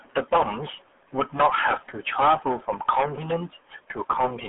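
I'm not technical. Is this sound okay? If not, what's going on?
No. For the whole clip, the speech has passed through the RealAudio 14.4 codec, an early internet format built to squeeze voices down dial-up modem lines. To fit, it discards everything above about 3.8 kHz, which removes the crisp top end that makes consonants like s and t clear. The damage here is heavy, so from start to finish the voice sounds muffled, thin and gargly, like a poor phone call.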